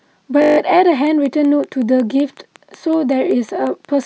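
A steady 50 Hz buzz replaces the speech from 0.42 to 0.58 s. This is a system hang loop: while the system stalled, the audio hardware kept replaying the same 20 ms buffer, looping it eight times, with practically no speech lost once playback resumed.

From 1.07 s to 4.04 s, a train of clicks ticks evenly over the speech and its pauses, about 5.4 per second and around fifteen in all, each roughly as loud as the speech. The likely cause is electrical interference or a faulty connection or power supply injecting regular pulses.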